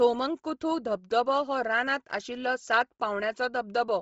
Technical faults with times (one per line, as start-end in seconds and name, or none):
0.00-4.01 Bluetooth LC3 compression